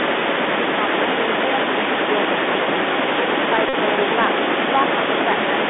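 Speech, carried throughout by the Bluetooth CVSD headset codec, with a line band of roughly 250 Hz to 3.6 kHz. The plainly audible damage suggests a 64 kbps one-bit delta stream whose adaptive step can't keep up with fast, loud high content. That leaves sibilants scratchy, peaks gritty, and a granular hiss beneath the speech. An echo leak also runs across the whole clip: a delayed copy of the speech trails the original by 394 ms at about 10 dB below it. This is likely a far-end loudspeaker whose echo canceller let part of the microphone pickup return down the line. From 3.69 to 3.74 s a Bluetooth headset packet repeated fault replaces 41.2 ms of audio with a steady buzz near 267 Hz. That points to about eleven consecutive lost packets, each replaced by a replay of the last good one.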